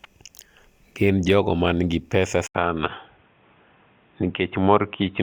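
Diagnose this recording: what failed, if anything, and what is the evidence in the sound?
At 2.47 s an 80 ms gap, then boxy speech with nothing above 3.8 kHz and faint new noise: likely the input switched to a poorer device at the driver.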